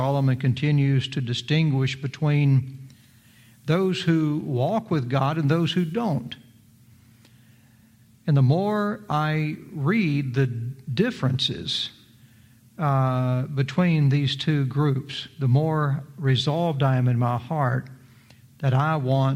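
Nothing technically wrong can be heard in this audio. No fault appears at any point.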